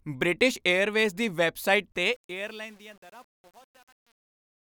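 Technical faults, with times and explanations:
1.92–4.8 s, truncation distortion on a fade: right after "ਬ੍ਰਿਟਿਸ਼ ਏਅਰਵੇਜ਼ ਦੀ ਵੈੱਬਸਾਈਟ" the fade-out begins around 2 s, and from 2.22 s the tail goes gritty. The gain stage drops bits without dither, which fits about 9-bit resolution, so quiet samples collapse into coarse square steps.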